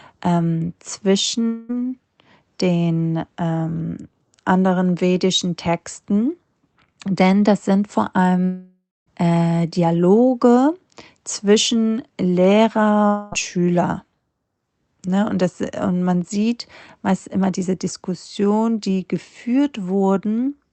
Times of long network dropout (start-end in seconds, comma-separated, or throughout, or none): 1.47-1.71, 8.45-9.08, 13.06-13.34